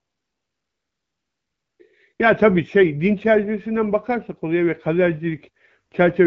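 From the start to 1.79 s there's AMR comfort noise. The phone decided nobody was talking, stopped sending speech frames, and the far end filled the gap with a smooth, steady synthetic hiss built from a rough sketch of the background. Then at 2.13 to 2.19 s it drops back in for a brief 60 ms blip, swapping the real room sound for that flat noise. Around it, the wideband speech itself comes through clear.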